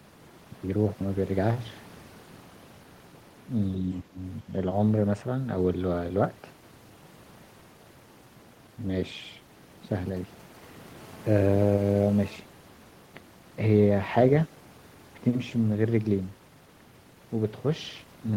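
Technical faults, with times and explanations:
4.03 to 4.19 s and 4.42 to 4.49 s, speech suppressed in double talk: the speech ducks sharply twice in quick succession, by around 20 dB in the first dip and a bit less in the second, with each dip under a fifth of a second. The likely cause is an echo canceller that heard both sides talking at once, couldn't separate this talker from the loudspeaker echo, and pulled the level down on both.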